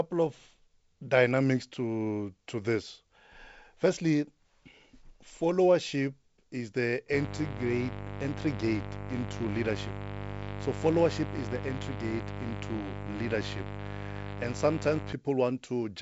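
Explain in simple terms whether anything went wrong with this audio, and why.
From 7.13 to 15.13 s, after "followership is the", a raspy buzz sits under the speech. This is mains buzz: spikes from the 50 Hz power supply leaking into the recording.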